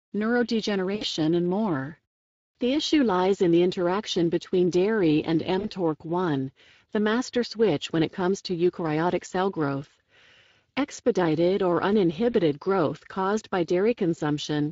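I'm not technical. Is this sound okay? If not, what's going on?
No. Throughout, the speech sounds rough, noisy and hoarse, as if squeezed through an old internet call. That comes from the Speex codec, a speech compressor used in older voice-over-internet calls and game chat. It rebuilds the voice from a simplified model and keeps too little detail about the sound source that drives the voice, so the damage is plainly audible across the whole clip.

There are also three brief glitches from VoIP packet loss concealed by the speech codec. At 0.95 to 1.04 s, just before "and more", a piece about 60 ms long is missing. At 5.59 to 5.69 s, right after "interaction between dairy and", about 40 ms is missing. At 12.31 to 12.35 s, just before "growth caused by", about 20 ms is missing. Each sounds like a short buzzy smear or a fading blur. The decoder filled each gap by stretching the last sound it received, and the voice stays weak or distorted for a moment after the sound returns.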